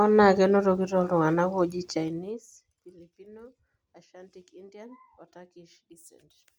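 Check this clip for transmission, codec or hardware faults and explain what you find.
One fault is present: zipper noise on a level change in this speech clip. From 1.95 to 2.60 s, just after "enotoki toltunganak oji", the level drops by roughly 25 dB in 2 dB steps, at around twenty per second, with no interpolation between them. Each jump puts a small discontinuity into the waveform, so the fade carries a rapid ticking, zipping texture for its whole duration.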